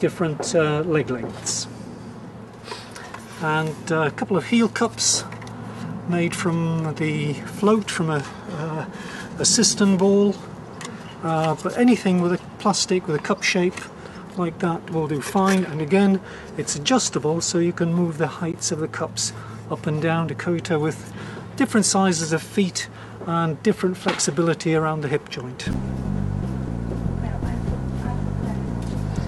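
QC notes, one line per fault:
18.52 s and 25.73 s, Bluetooth stall: 13 ms and 8 ms silent gaps, likely drained headphone buffer; flat waveform gaps, blank vertical spectrogram strips.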